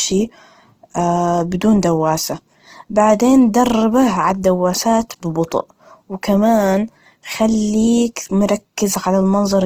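Throughout, Opus compression, likely at a low rate near 16 kbps in its CELT mode, fills bit-starved bands with folded spectrum or noise, making the speech plainly rough and grainy.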